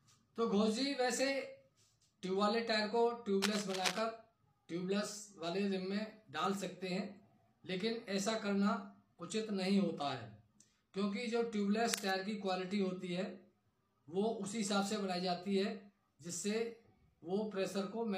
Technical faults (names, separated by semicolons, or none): cable scratch noise